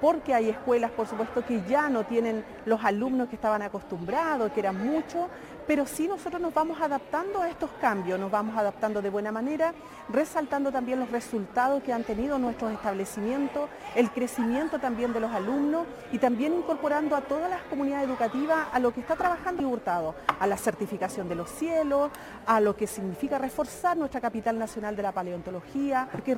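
At 19.6 s the audio jumps forward: compressed frames were skipped, so a short run of encoded frames never reached the output, either missing from the file or rejected by the decoder as damaged. The frame length here is 26.1 ms, and roughly 150 ms of audio vanishes, about seven frames' worth. On a waveform the envelope shows an abrupt discontinuity, and a spectrogram shows a brief vertical smear where the time structure breaks.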